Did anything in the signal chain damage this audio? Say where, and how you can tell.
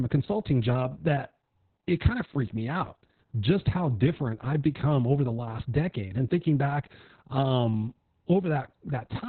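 Yes. The damage is at the codec stage, from Opus voice compression, and it runs through the whole speech clip. Nothing is heard above about 4.3 kHz, so the band has been cut to narrowband. The speech sounds muffled, hoarse and slightly robotic. That points to the SILK linear-prediction coder at a very low bitrate, around 6 kbps. At that rate the coder narrows the band and codes the excitation coarsely, and the artefacts are heavy.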